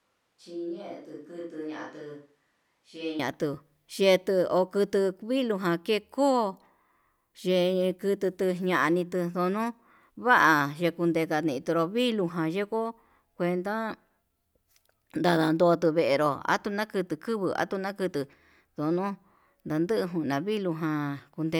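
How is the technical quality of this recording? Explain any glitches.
The opening has one clear glitch. From the very start until 3.19 s, the speech sounds roomy and hollow, thinner in the bass and roughly 10 dB quieter, with faint room noise well below the speech, before snapping abruptly to a close, full sound. This is the sound of a switch to a distant microphone: the close microphone's signal was likely missing, so a far-off pickup caught the room's reflections instead.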